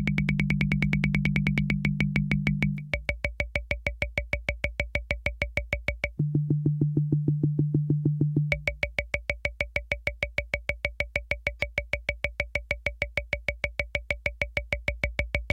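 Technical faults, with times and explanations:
No technical faults can be heard in this recording of sounds.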